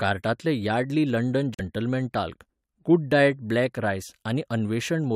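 At 1.54 s, a corrupt frame muted: the decoder rejected damaged data fitting two frames, leaving 0.06 s of abrupt silence, with a flat waveform and blank spectrogram column.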